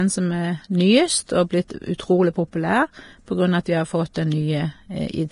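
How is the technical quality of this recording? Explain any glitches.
The technical quality is fairly rough. The whole recording has heavy codec damage, and there are three short smeared attacks.

Throughout the clip the speech is hissy and grainy, and nothing comes through above about 10.5 kHz. That's the likely result of Vorbis compression at a low setting, which fits a bitrate somewhere around 31 kbps. At that rate the codec trims the top end and quantises the remaining treble so coarsely that fine detail turns into noise-like grit, which roughens the tone.

Pre-echo shows up at 1.68 to 1.70 s (about 23 ms), at 1.98 s, and at 4.14 s. A transform codec spreads its quantisation noise across the whole block, so when a sharp onset lands late in a block, noise meant for the loud part leaks into the quiet moment before it. You hear a brief hiss just ahead of each attack, and the attack itself sounds soft and smeared rather than crisp.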